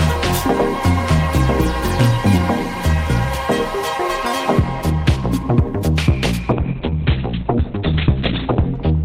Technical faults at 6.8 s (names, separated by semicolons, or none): call bitrate drop